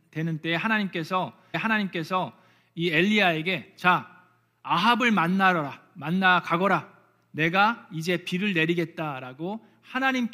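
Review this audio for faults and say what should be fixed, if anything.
Stream segment repeated: the player queued a chunk twice, so 1.53 to 2.53 s replays a second of speech after a blip at the jump back. Track segment sequence numbers in the player and discard any segment already queued or played.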